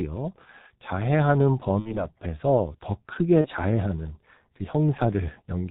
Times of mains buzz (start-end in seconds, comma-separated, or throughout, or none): none